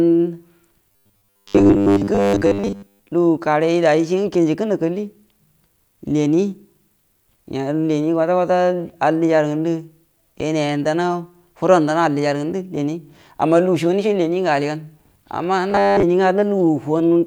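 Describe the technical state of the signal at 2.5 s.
Robotic sound from repeated short buffers covers 0.92 to 3.12 s, including 2.5 s. Audio likely arrives too rarely, so a 10 ms fragment is looped over roughly 70% of the span, stamping a rigid 100 Hz metallic buzz onto the speech.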